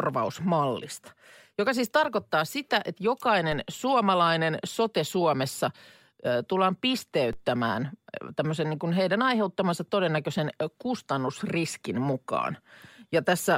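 The waveform's zero line jumps twice, a DC step of about -29 dBFS each time, draining away through a roughly 5 Hz high-pass. At 3.52 s, after "siis tarkoittaa sitä että", and at 7.33 s, after "ää tullaan", each step lands as a low thump beneath unchanged speech.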